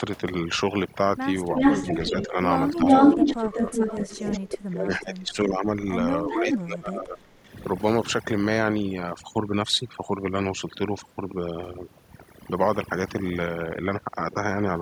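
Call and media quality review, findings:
Overdone noise removal, whole clip: background dropped and broken into twinkly specks. Denoiser set way too hard, clamping bands near its noise estimate and taking quiet speech detail with them.

Echo leak, four spots: 1.55–2.27 s, 2.85–4.38 s, 4.91–5.31 s, 6.31–6.57 s. A delayed copy of the voice trails at roughly 0.37–0.39 s. It's about 5 dB and about 10 dB above the speech in the first two, then about 20 dB and about 5 dB under it. Likely the far-end speakerphone AEC not fully cancelling, with the residue sent back.

Speech suppressed in double talk: 2.1–3.57 s, where the talker dips about 10 dB for roughly 0.4 s in total. At 4.38–5.67 s and 6.26–7.54 s it drops by about 25 dB, over around 1 to 1.5 s. This overlaps the echo bursts. Likely the AEC mistaking near-end talk for echo and ducking both.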